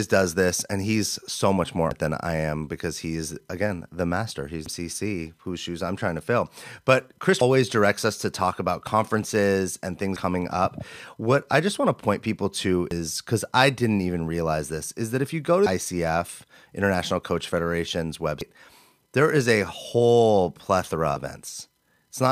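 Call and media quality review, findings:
Audio missing between chunks. Skips at 1.91, 4.66, 7.41, 10.16, 12.91, 15.66, 18.41 and 21.16 s, every 2.75 s. About 0.3 s of speech dropped each time, with the two sides butted together. Likely a chunked recorder losing audio at each handover, which fits 3 s chunks.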